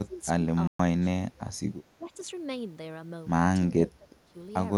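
An echo canceller, likely caught in double talk and unable to tell the near talker from loudspeaker echo, pulls the speech down, causing speech suppressed in double talk at 0.0 to 0.17 s (about 15 dB) and 0.43 to 0.47 s (a slight dip, about 5 dB). At 0.67 s the player likely runs short of data, a playback stall silencing the speech for 120 ms before it resumes at 0.79 s. The same suppression returns at 1.0 to 1.49 s (deepest, about 20 dB), 1.99 to 2.13 s (about 10 dB) and 3.73 to 4.35 s (about 15 dB), the speech sinking and thinning in patches.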